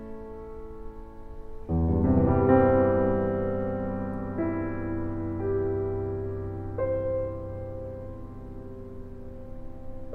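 Music clip with nothing technically wrong to report.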